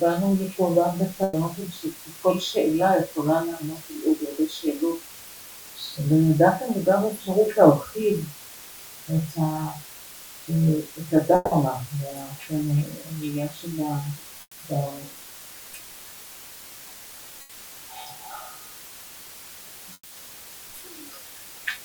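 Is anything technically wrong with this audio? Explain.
Yes, there are three kinds of fault.

Low bit depth with dither runs throughout. The audio is quantised to 7 bits with dither added before rounding, so the rounding error becomes a constant, even hiss sitting roughly 20 dB below the signal, with no distortion.

Bursts of packet loss occur at 1.23–1.35 s and 17.41–17.51 s. About 100 ms and 80 ms of audio were lost. The receiver extended the last sound, fading it, across each gap, and playback then resumes further on without the missing part.

Three longer gaps, at 11.35–11.53 s, 14.41–14.59 s and 19.93–20.13 s, are likely a long network dropout. About 160 ms, 160 ms and 180 ms go missing. Each is filled with a decaying continuation of the preceding sound that ends in brief silence, about 10 ms in the first and 50 ms in the others, before the audio returns.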